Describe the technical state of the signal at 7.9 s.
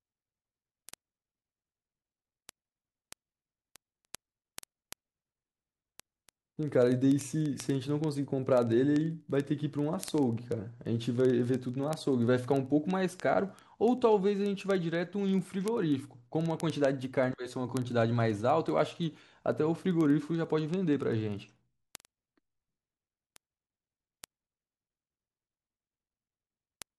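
At 7.9 s you're right in the middle of word clock ticks, which run from 0.11 s to 26.96 s. The receiving device isn't locked to the sender's clock, with a mismatch of around 500 ppm. So every time the two clocks slip past each other, one sample gets dropped or doubled. That gives roughly twenty sharp little ticks a second under the speech, some louder than others, and several hundred across the whole take.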